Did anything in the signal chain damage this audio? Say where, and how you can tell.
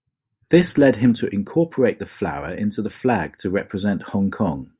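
No, nothing I can hear points to damage at any stage of the chain; the speech comes through intact.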